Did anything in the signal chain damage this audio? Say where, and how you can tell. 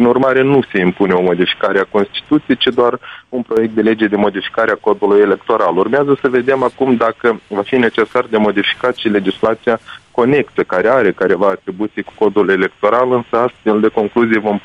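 Yes. One channel drops out from 3.16 to 3.57 s and again from 11.50 to 12.06 s. The level falls abruptly by about 6 dB, then snaps back. With one side silent, the mono sum keeps half the shared signal, pointing to a likely intermittent analogue wiring connection.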